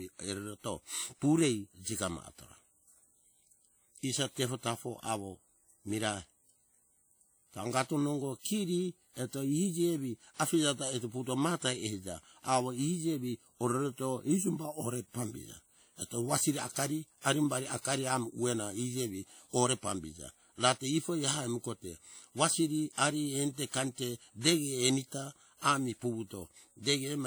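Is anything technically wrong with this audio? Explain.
Yes. Throughout the speech there is plainly audible WMA compression damage, likely from a transform codec at a low rate, perhaps around 48 kbps. Its long blocks smear quantisation noise across tens of milliseconds, so the speech rings and a breathing hiss tracks it. A spectrogram shows patchy, holed mid-to-high bands, though content reaches about 20.1 kHz.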